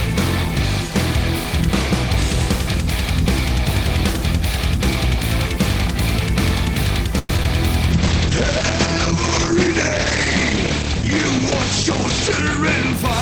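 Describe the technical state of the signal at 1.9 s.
At 1.9 s the signal is intact, with no audible dropout, clipping, distortion or other fault at that point.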